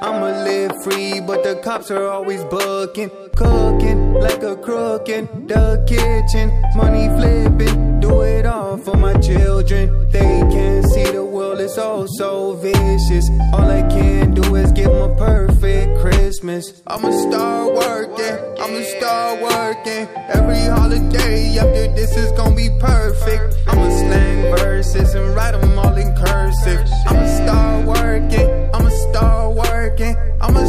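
No technical faults are audible.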